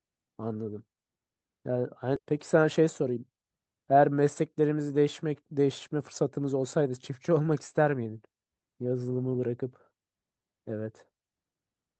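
Speech that, at 2.15 to 2.17 s, abruptly jumps forward with no gap, losing roughly 0.7 s of audio and splicing the two sides almost directly. This skip ahead comes from a stretch of audio being dropped, in transit or by the jitter buffer, while later packets were already queued. From 2.26 to 4.55 s the talking sounds hurried but keeps its normal pitch, running at 108% speed. This jitter buffer speed-up happens because the receiver, holding more audio than its target, repeatedly trims pitch-period-sized slices to shed about a fifth of a second of delay. The audio carries coding noise from the WebRTC call path's Opus codec, and its top end stops at 8 kHz.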